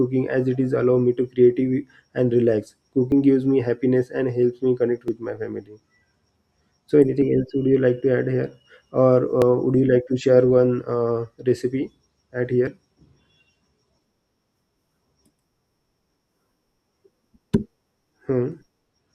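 At 3.12 s, between "and relax" and "gives me happiness", the speech skips ahead. There is no gap. Roughly 5 ms of sound is missing. At 5.08 s, just before "my family", about 10 ms goes. More skips follow at 9.42 s and 12.67 s, after "one uh recipe at". Each is likely a dropped buffer (overrun). The program fell behind, the hardware overwrote unread samples, and the two sides were joined directly.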